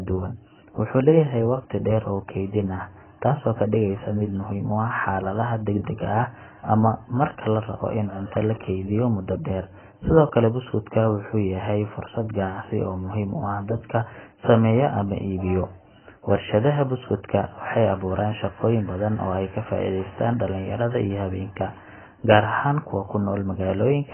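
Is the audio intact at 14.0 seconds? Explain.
No. At 14.0 seconds the speech carries the heavy AAC compression damage heard throughout the clip. Nothing sounds above about 3.1 kHz, so sibilants lose their edge and the sound turns dull and muffled, with a smeared, warbling texture on sustained sounds. This is likely AAC-LC coded at a very low bitrate, consistent with about 12 kbps, where the encoder lowers its cut-off and starves the remaining bands of precision.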